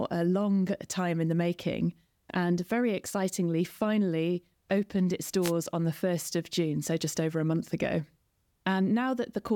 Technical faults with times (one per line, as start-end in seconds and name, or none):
5.41-5.52 wireless microphone noise hit